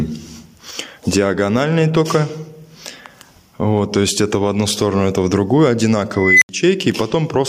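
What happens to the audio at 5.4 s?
At 5.4 s the clip shows the gain pumping that runs through all of it. The input gain was likely set far too high, with a fast limiter or compressor pulling it down on each loud sound. Level swings by around 10 dB, leaving the sound squashed.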